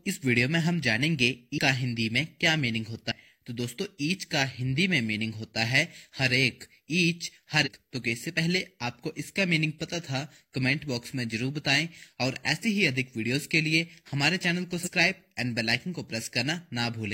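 At 1.54 to 1.59 s, 3.07 to 3.13 s, 7.62 to 7.68 s and 14.82 to 14.89 s the audio jumps forward, consistent with compressed frames skipped. Whole frames never reach the output, so a chunk of the sound goes missing. That chunk is about a fifth of a second in the first three cases and somewhat less in the last, which fits a few frames of 46.4 ms each.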